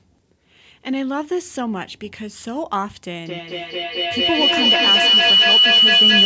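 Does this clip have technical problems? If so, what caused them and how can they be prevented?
Yes. From 3.26 s to the end of the speech clip there is a feedback howl: two devices in the same room are on the call, so sound leaves one loudspeaker, re-enters the other microphone and comes back louder on each trip. It narrows to a tone around 3 kHz, with the loop repeating roughly every fifth of a second, and peaks about 10 dB above the speech. Unlike an echo, which fades, each repeat grows. Muting or using headphones on the second device prevents it.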